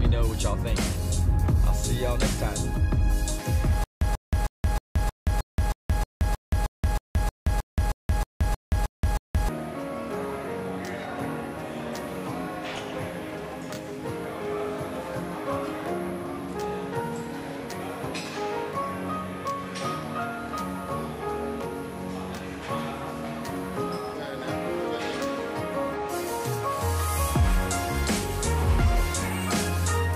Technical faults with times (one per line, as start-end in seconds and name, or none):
3.84-9.49 stutter with silent gaps